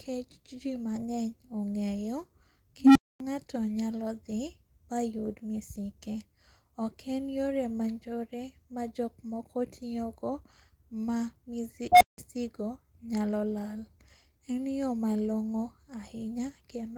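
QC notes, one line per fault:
2.81–3.20 s and 11.92–12.18 s, unstable filter: a recursive filter runs away, so a tone near 300 Hz, then near 700 Hz, swells over 148 ms and 88 ms, clips, and drops to silence for 249 ms and 175 ms. The spectrogram shows a bright horizontal band, and the waveform shows an exploding envelope that flattens where it clips before a gap.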